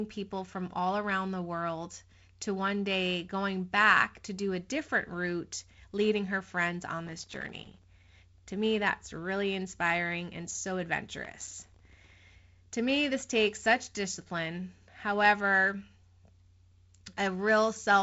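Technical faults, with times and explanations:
7.07–7.84 s and 11.25–12.16 s, processor overload crackle: two bursts of gritty, tearing crackle sit on the speech, the first just after "leading her friends on" and the second just after "really inspiring and so", each lasting under a second before the sound clears. The processor fell behind and missed a long run of tiny buffer deadlines, around a hundred per burst at what sounds like roughly 1.5 ms each. Every miss dropped in a sliver of silence with hard edges, and the rapid string of those cuts is what makes the crackle.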